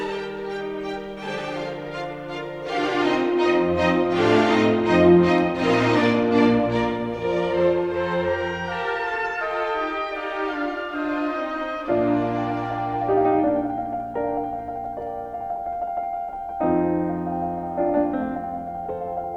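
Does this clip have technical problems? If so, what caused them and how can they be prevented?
No, there are no technical problems to report here.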